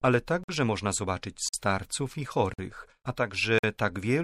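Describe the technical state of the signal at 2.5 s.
At 2.5 s the signal has a gap between chunks, from 2.54 to 2.59 s. A 50 ms stretch of silence sits at the join between two 1-second blocks of audio, so the sound stops abruptly and resumes with nothing missing, just delayed. It is heard as a brief hard-edged hole. On a waveform it appears as a flat near-silent strip with square edges, and on a spectrogram as a clean vertical blank band across all frequencies.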